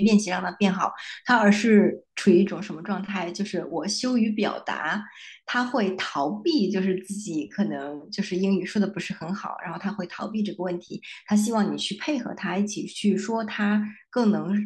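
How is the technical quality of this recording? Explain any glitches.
A sudden gain jump at 2.47 s drops the speech and its background noise together by about 5 dB, staying lower to the end. The change happens between adjacent samples with no ramp, likely from a gain setting being applied instantly.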